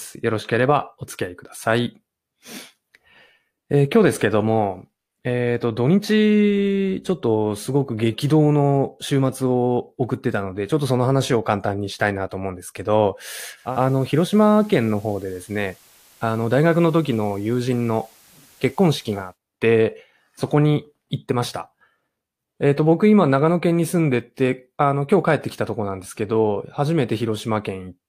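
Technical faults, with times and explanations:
13.55–19.38 s: digital radio blending to analogue. A 268 ms cross-fade switches to FM. Hiss appears roughly 30 dB down, and the level drops about 1 dB.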